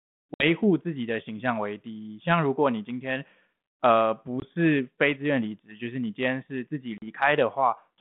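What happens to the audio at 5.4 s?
Nothing goes wrong at 5.4 s: the speech continues intact through that moment, with only the narrow telephone band and light coding grain of its 32 kbit/s G.726 ADPCM path.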